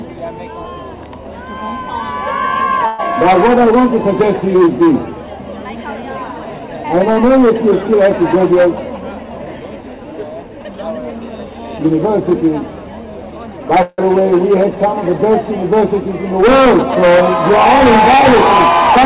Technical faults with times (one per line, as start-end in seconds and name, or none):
2.86-3.01 call audio freeze
8.52-9.53 jitter buffer speed-up
13.82-14.00 call audio freeze